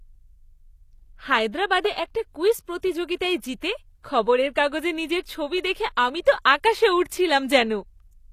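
Throughout, the speech carries plainly audible HE-AAC compression damage: s sounds come out gritty and metallic, likely from spectral band replication rebuilding the treble from copied lower bands. This fits a low bitrate around 24 kbps. A spectrogram shows a hard ceiling at 14.9 kHz, with blocky, repeated-looking texture above the crossover.

At 4.03 s there is pre-echo. The codec spreads its quantisation noise across the whole block, so a short hiss leaks about 19 ms ahead of a sharp attack and softens it. On the waveform this shows as low noise rising before the transient, and on a spectrogram as a short broadband smear just before it.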